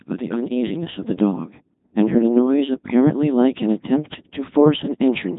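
From start to finish the speech has passed through a Codec 2 vocoder, which discards the waveform and rebuilds the voice from sine waves using only pitch, voicing, energy and envelope. The result is heavily robotic and buzzy, nothing above 3.8 kHz, consistent with the 2.4 kbit/s mode.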